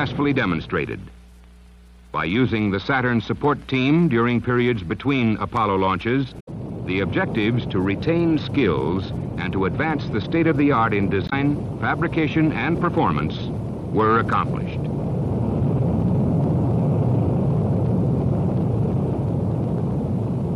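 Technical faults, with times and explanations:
6.36–6.48 s and 11.25–11.33 s, damaged data in a compressed stream: two brief disturbances, about 0.12 s and 0.08 s long, where corrupted bytes made the decoder misread or reject frames and hunt for the next valid header. The disruption is a decoding breakdown, unlike an ordinary edit splice.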